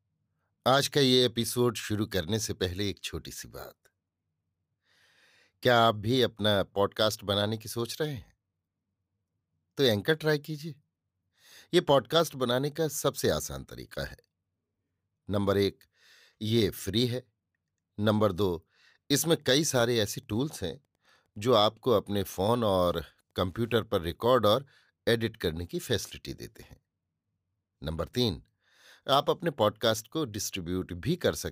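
From 19.32 to 24.04 s the speech carries Wi-Fi interference: a nearby radio's transmissions are being picked up and rectified by the audio circuit, so each beacon, sent every 102.4 ms, becomes a faint tick, about ten a second, sitting far below the voice. On a spectrogram this shows as evenly spaced thin vertical lines spanning a wide frequency range; in the waveform, tiny regular spikes appear beneath the speech envelope.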